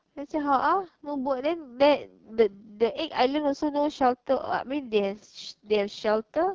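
Throughout the speech, the AMR wideband (HD Voice) codec is working at heavy damage, which points to its lowest 6.6 kbit/s mode. The pulse-driven vocal tract model cannot follow the signal closely there, so the speech sounds rough and raspy, with noise-filled upper bands.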